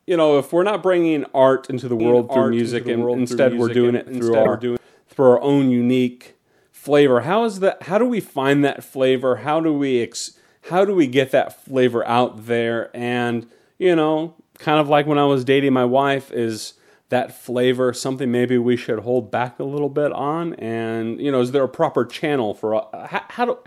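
A doubled audio track runs from 2.00 to 4.77 s. Over that span a second, full-band copy of the speech sits roughly one second behind the original, about 5 dB quieter, with no added reverberation or tonal colouring. It cuts in and out abruptly at the span's edges rather than fading. The likely cause is the same signal reaching the mix twice, once directly and once through a slower route, so the two copies stay offset by a fixed delay.

Damaged data in a compressed stream shows up from 4.43 to 4.47 s, inside the doubled section. For those 40 ms the decoder is fed corrupted frames it cannot read correctly, so it loses its place and hunts for the next valid frame header before resuming. The result is a short glitch in the speech where the unreadable data was passed over.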